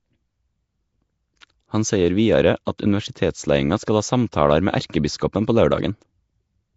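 Throughout the speech there is a rough, hissy halo and a smeared, underwater colour, with nothing above 7.7 kHz. This is likely Nellymoser compression at a low fixed rate near 32 kbps. Weak bands are refilled with noise, so the sound is grainy, not simply dulled as it would be with a plain low-pass filter.

Pre-echo appears at 1.41 s, at 2.65 s and 2.78 s just after "seier vidare", and at 4.32 s just after "skal ha". Each time a short hiss of 12 to 15 ms runs ahead of a sharp onset and softens it. Noise sized for the loud attack has spread backward into the quiet moment before it, whereas a click would sit on the attack itself.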